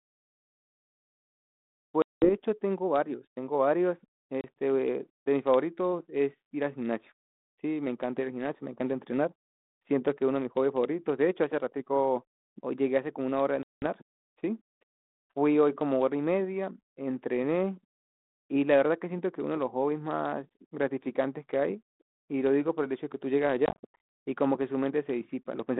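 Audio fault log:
2.02–2.32 s, 4.41–4.44 s, 13.63–13.86 s, 23.66–24.00 s: packet loss on an ADPCM call. Dropouts of 200, 30, 190 and 310 ms become silence. The last is broken into short gaps, the longest 80 ms. Each is a flat-lined waveform and a blank vertical spectrogram stripe with hard edges. The decoder's predictor and step size lose track of the sender's, so sound resumes with brief distortion.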